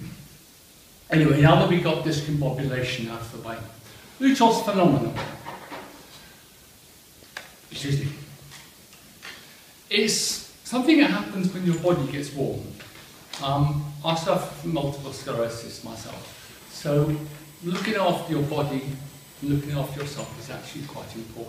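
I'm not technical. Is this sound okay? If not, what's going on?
No, there's a problem near the end. From about 16.25 to 19.94 seconds you can hear a USB whine: a thin, steady, high-pitched tone sitting well below the main sound, loudest up around 8 kHz, with a lower strand at 1 kHz. It happens because a USB connection does its work in tiny, regular bursts every thousandth of a second or faster, and that rhythm leaks into the audio through shared power or ground wiring, turning into a fixed-pitch whine.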